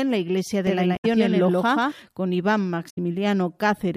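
From 0.67 to 1.92 s a doubled audio track appears: a second full-band copy at roughly equal level trails by about 150 ms, dry and without room colour, cutting in and out abruptly. This likely comes from a second capture through a slower path or two misaligned copies in an edit. Inside that stretch, from 0.93 to 1.05 s, and again later from 2.86 to 2.98 s, damaged data in the compressed stream causes a brief chirp or squawk. The decoder misreads the corrupted frames, loses sync and skips ahead to the next valid frame header.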